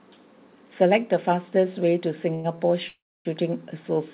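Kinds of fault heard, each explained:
Short stall from a late packet: A packet arrived late and the jitter buffer emptied, so the receiver held the last sound until it came, then resumed from the same point with nothing lost. This happens at 2.34 s for about 0.1 s and at 2.56 s for 24 ms, heard as a sound briefly stretched with a slight buzz or dip. On a spectrogram the harmonics run flat and unchanging for that span. The waveform shows a short, repeated, slightly dipping cycle.
Call audio freeze: From 2.88 to 3.27 s the speech halts for about 0.39 s, likely because packets were held up in transit and the jitter buffer ran dry. The receiver stretched the last sound into a fading buzz or hiss for roughly 90 ms, then left about 0.28 s of silence before the speech picked up where it stopped, with nothing missing. A spectrogram shows a smeared tone decaying into a blank band. The waveform shows a shrinking envelope and then a flat line.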